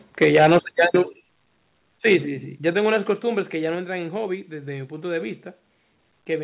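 From 0.21 to 1.0 s the speech shows microphone overload: loud syllables are driven about 8 dB past full scale, likely from input volume set too high, so their tops are sheared off, giving a harsh crackle. The waveform shows flat-topped peaks on a few percent of samples, and the spectrogram shows smeared broadband energy on those syllables.

The microphone volume is stepped down four times, at 0.24 s (about 3 dB), 1.23 s (about 7 dB), 2.73 s (about 5 dB) and 3.75 s (about 3 dB), likely the call software's automatic gain reacting to the clipping. Each step is an abrupt drop in speech and background level together. The waveform envelope shrinks in a clean staircase, and the spectrogram darkens uniformly at each step, all below the 4 kHz ceiling of the G.711 call path.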